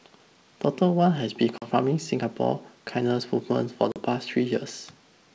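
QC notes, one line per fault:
1.58–1.68 s and 3.92–3.96 s, packet loss on an ADPCM call: each event drops about 40 ms of the G.722 wideband stream, roughly four packets, leaving a hard-edged silent hole. The decoder's adaptive predictor and step size then no longer match the sender's, so speech resumes with brief, slight distortion. It settles within a few tens of milliseconds as the decoder state converges.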